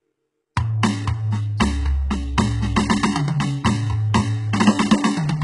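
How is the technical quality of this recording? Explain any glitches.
The music is heavily compressed throughout, with one audible pre-echo near the start.

Throughout, nothing is present above 11.1 kHz. The treble is rebuilt from lower bands, so it sounds gritty and metallic. The likely cause is HE-AAC compression at a very low bitrate, around 12 kbps.

From 0.55 to 0.57 s, a brief hiss smears in just before a sharp attack. This is pre-echo: the codec's block noise spreads into the quiet moment before the hit.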